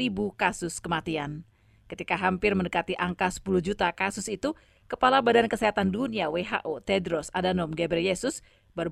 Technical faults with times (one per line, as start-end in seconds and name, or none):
0.00-8.91 overlap-add ripple